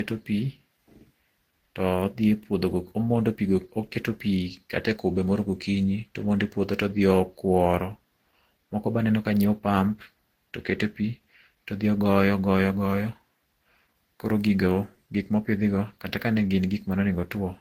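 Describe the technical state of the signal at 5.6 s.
At 5.6 s the speech carries the marks of transcoding between lossy codecs, as it does for the whole clip. Nothing is heard above 16.6 kHz. Two layers of artefacts overlap. A smeared, low-rate texture sits under a second coding pass that has spent its bits re-encoding those earlier flaws. This likely comes from a very low-bitrate Opus encode later passed through Vorbis, which fits the combined sound.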